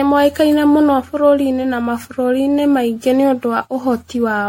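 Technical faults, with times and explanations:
Throughout, generation loss: the speech has a swirly, watery smear with a hollow, scooped-out quality, consonant attacks go soft and blurry, and nothing comes through above 16.5 kHz. That's more damage than one lossy pass would cause. The likely cause is the audio being encoded as MP3 around ten times, with the character fitting 64 kbit/s. Each re-encode quantises again on a shifted frame grid, so the noise and spectral holes pile up.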